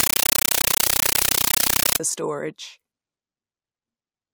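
From 0.0 to 2.0 s, a compressed stream played as audio replaces the speech. Undecoded AC-3 frames come out as loud 9.3 ms noise bursts, each followed by silent padding, 31.25 times a second. That rigid chattering rhythm distinguishes it from random static.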